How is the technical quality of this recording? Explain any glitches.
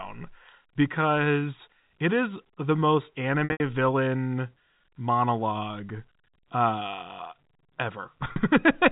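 The recording has two packet-loss dropouts, heard over a telephone-band G.711 channel that cuts everything above 4 kHz. Packet loss with pitch repetition occurs at 3.44–3.60 s, between "it is the most" and "villain monologue uh" (140 ms lost, longest run 80 ms), and again at 8.32–8.36 s (40 ms). The receiver loops the last pitch period, giving a brief held, buzzy tone before the sound resumes.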